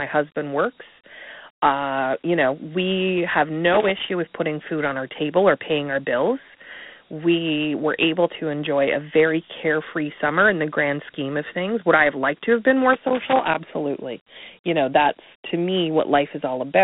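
Dialogic VOX ADPCM runs through the whole of this speech recording. The line band spans roughly 150 Hz to 3.7 kHz, with nothing at all above 3.9 kHz. A rate of 32 kbps fits 4-bit samples taken 8,000 times a second. Each sample stores only a small step from a predicted value, so the coarse quantisation leaves a plainly audible gritty hiss trailing the speech.

Loose connector crackle breaks in twice. The first burst runs from 3.72 to 4.10 s, starting after "you know we have" and clearing before "with putting food on". The second runs from 12.93 to 13.55 s, following "to have been more". A worn contact rapidly making and breaking chops the signal, and any DC on the line turns each break into a pop. The result is irregular scratchy crackle.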